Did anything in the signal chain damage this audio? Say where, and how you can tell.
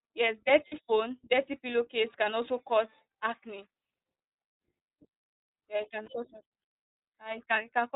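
Yes. At the codec stage the whole clip goes through iLBC. Nothing above 4 kHz and a plainly rough, synthetic edge point to its 15.2 kbps, 20 ms mode.

On the network side, lost iLBC frames appear at 0.68–0.74 s and 6.02–6.10 s. The decoder repeats the last pitch cycle as a 40 ms and a 60 ms buzzy hold, then recovers instantly.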